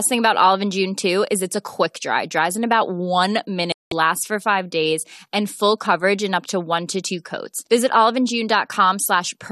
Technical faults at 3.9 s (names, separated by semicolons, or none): digital broadcast dropout